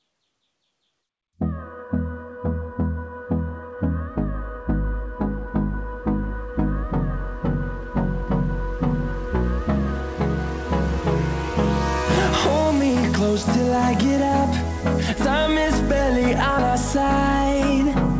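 No faults can be heard: the audio carries the ordinary character of a wideband call path, with its content stopping at 8 kHz, which fits a codec such as G.722.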